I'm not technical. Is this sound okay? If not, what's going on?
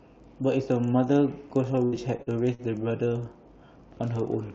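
No, it has three problems.

Filter restarted on every block, throughout: a filter resets every block, leaving a buzz of ticks, about 25 per second, that gets louder with the speech.

Repeated packet loss (robotic sound), 1.75 to 2.62 s: six short gaps, the longest 73 ms, were patched by stretching the previous sound, so the speech turns choppy and robotic.

Jitter buffer slow-down, 2.61 to 2.89 s: the receiver repeated tiny slices of sound to rebuild its reserve, so speech plays at about 87% speed at unchanged pitch.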